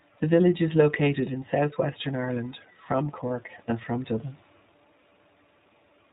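A speech recording carried through the iLBC codec, and the coding damage is plainly audible across the whole clip: the voice sounds slightly rough and synthetic, with the thin, boxy quality of narrowband telephony. On a spectrogram the energy stops dead at 4 kHz, leaving everything above empty. The texture fits the codec's 20 ms frame mode at around 15.2 kbps, with each frame's excitation rebuilt independently. There is also one lost iLBC frame, from about 3.28 to 3.31 s, just before "and from". The decoder fills the gap by repeating the last pitch cycle blended with noise, so the sound briefly turns into a held, faintly buzzy vowel. The gap's length points to a single missing 20 ms frame. In the waveform this shows as a short stretch of regular, repeated cycles, and on a spectrogram as flat, unchanging harmonic bands. Normal speech resumes almost immediately afterwards.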